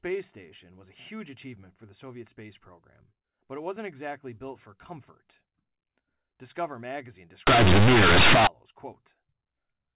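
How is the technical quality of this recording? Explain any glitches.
The speech has the narrow sound of G.711 telephone coding, with nothing above 4 kHz, and one serious glitch.

From 7.47 to 8.47 s comes companded audio read as linear. Mu-law bytes are played as plain 8-bit samples without expansion, so every sign change swings across half the range. It sounds like harsh, loud buzzing with noise filling the pauses. Ordinary clipping would leave the quiet stretches quiet.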